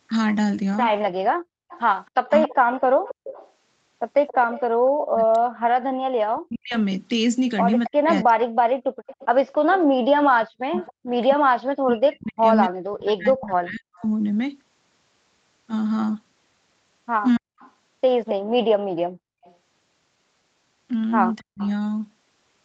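Right at 1.34 s the room sound gets yanked down, about 37 dB, until 1.69 s. That's background gated by the echo canceller clamping the mic while the far-end loudspeaker plays. It happens again from 8.82 to 9.06 s, about 36 dB down.

From 1.69 to 4.61 s you hear a faint copy of the voice played on the loudspeaker trailing by 273 ms, roughly 15 dB under the main voice. That's an echo leak, likely a speakerphone canceller not fully removing its loudspeaker pickup. It returns from 7.85 to 14.07 s and from 17.35 to 21.69 s.

Between 2.12 and 14.04 s the talker keeps dipping or cutting out in pieces, adding up to around five seconds, by roughly 40 dB. That's speech suppressed in double talk, likely the canceller turning down both its talker and the echo while both sides overlap. Brief repeats occur at 17.38 to 17.64 s and 21.4 to 21.61 s.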